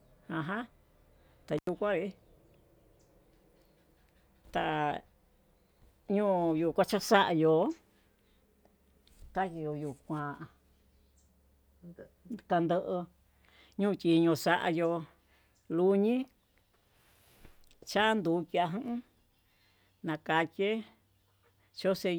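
At about 1.58 s a loose cable or plug briefly loses connection, an intermittent contact that breaks the signal path for roughly 86 ms before the joint closes again near 1.69 s. While the line is open the speech drops out or breaks up, leaving only faint hiss in the gap, and the moments where the contact breaks and remakes add a short crackle at each edge, so the cut sounds like a scratchy stutter rather than a clean silence.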